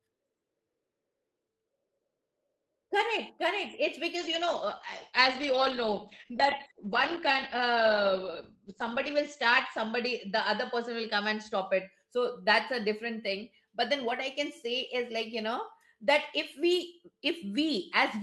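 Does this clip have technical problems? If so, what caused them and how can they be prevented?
Yes, there's a call bitrate drop from 4.16 to 11.95 s. The encoder falls from 32 to 10 kbps, so the speech turns rough and muffled, losing everything above 8 kHz. A steadier connection, like a wired link or less competing traffic, keeps the bandwidth estimate from collapsing.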